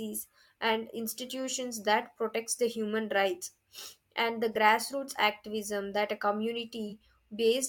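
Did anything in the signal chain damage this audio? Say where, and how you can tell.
Yes. The damage happened at the codec stage, and it is corrupt frame concealment. The speech has two brief concealed stretches, at 4.53 to 4.55 s and at 6.89 to 6.93 s. Their lengths fit one or two lost coded frames. The decoder detected bad bits in those frames and covered the gaps itself. It muted them or filled them with a scrambled copy of the last good spectrum.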